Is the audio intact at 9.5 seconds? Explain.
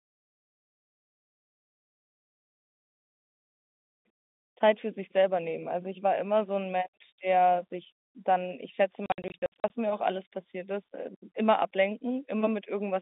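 No. Between 9.06 and 9.7 s the link dropped packets and the receiver played silence in their place, consistent with 20 ms packets, in gaps of up to 60 ms. About 340 ms of that 640 ms span is missing, so the speech breaks into holes with hard-edged cuts.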